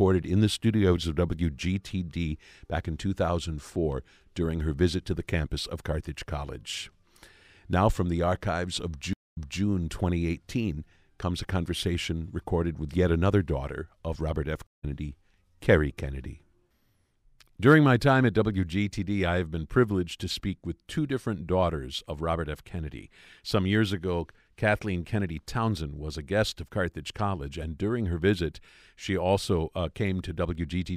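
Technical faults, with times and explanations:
9.13–9.62 s, stream reconnect: right after "from the archives of" the speech drops out for 231 ms, then resumes about 261 ms earlier, repeating a fragment. The connection broke, the player restarted a fresh decoder, and the server resent a burst of already-played audio.
14.67–14.85 s, stream reconnect: the speech cuts to silence for 163 ms and comes back roughly a tenth of a second further on, so a sliver is skipped. The link dropped and the new decoder joined the live stream past where playback stopped.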